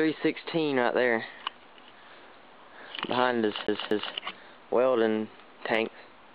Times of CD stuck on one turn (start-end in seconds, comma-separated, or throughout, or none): 3.67-4.14